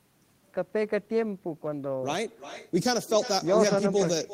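Throughout, there is echo with no canceller: the far end's loudspeaker feeds its own microphone, and nothing strips that out before the network returns it. Each stretch of speech is shadowed, roughly 400 ms later, by a thinner copy about 13 dB quieter.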